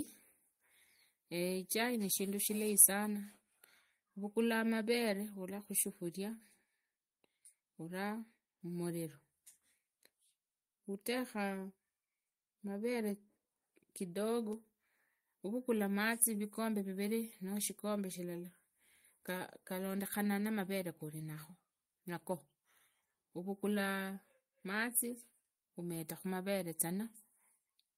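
No audible technical faults present.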